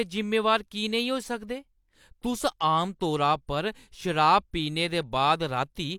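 No audible faults in this speech.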